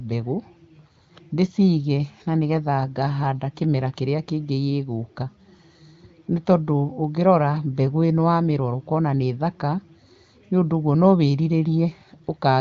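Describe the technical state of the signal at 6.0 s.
At 6.0 s the audio is intact, with speech carried cleanly through an AMR wideband (HD Voice) path whose band stops around 7.5 kHz and whose clarity fits one of the higher AMR-WB rates.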